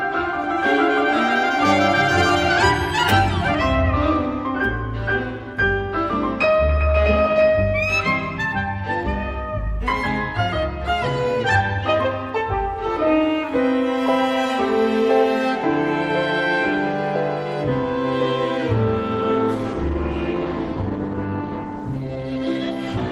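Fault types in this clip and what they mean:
Adaptive stream at a lower bitrate: the slowed connection pushed the player onto a cheaper encoding, so from 19.14 s to the end codec artefacts rise abruptly with no gap, which fits Opus falling from 64 to 16 kbit/s.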